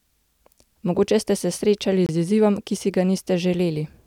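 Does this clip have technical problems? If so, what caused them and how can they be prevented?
Yes. A Bluetooth stall cuts the speech to silence from 2.06 to 2.09 s, a gap of 25 ms, after which the sound resumes. The likely cause is radio interference delaying packets on the wireless link: the headphones' buffer ran empty before the resent packets arrived, so playback paused briefly and then continued once data was available. To prevent it, keep the phone close with a clear line of sight, move away from crowded 2.4 GHz sources, or use a wired connection.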